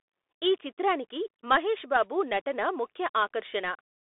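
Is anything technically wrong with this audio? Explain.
Yes. Throughout the speech the audio carries Bluetooth CVSD headset codec damage. Each sample is coded as a single up-or-down step of adaptive size, consistent with a 64 kbit/s link. Nothing passes above 3.8 kHz, leaving a thin 300 Hz to 3.6 kHz telephone band with audible granular hiss and scratchy distortion.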